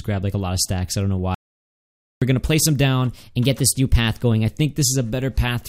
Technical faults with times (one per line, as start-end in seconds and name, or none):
1.35-2.22 audio dropout to silence
3.13-4.50 drift correction step